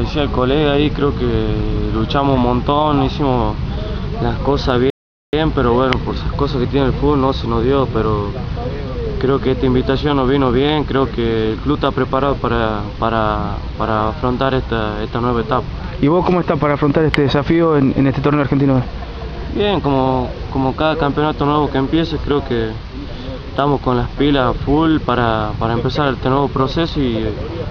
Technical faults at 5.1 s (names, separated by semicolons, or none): rebuffering stall